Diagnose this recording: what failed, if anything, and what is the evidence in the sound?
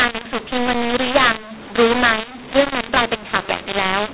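Codec stage: mu-law and A-law mixed up throughout. The G.711 mu-law speech, band-limited below 4 kHz, is decoded as A-law, scrambling sample levels into harsh distortion. The waveform shows pauses lifted well off zero, and the spectrogram shows noise filling every gap.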